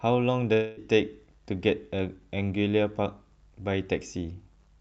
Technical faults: long network dropout

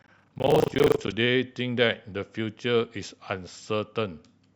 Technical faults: buffer tearing

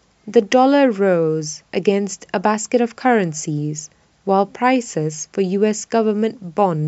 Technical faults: none

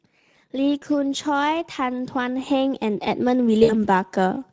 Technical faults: Speex codec; automatic gain rising; VoIP packet loss concealed by the speech codec

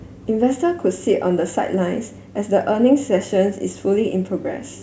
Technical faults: none

